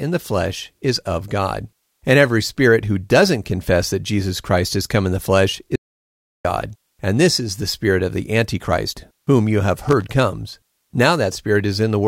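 At 5.76 s, right after "come in the flesh", the speech cuts to an audio dropout to silence lasting about 0.69 s, until 6.45 s. The gap is silent with no room tone, which points to the input likely being lost while recording continued.

From 9.84 to 10.04 s, just after "whom you have", a loose connector crackle appears: a 0.2 s irregular burst of scratchy crackle, as a worn or dirty contact rapidly makes and breaks, chopping the signal on its way in.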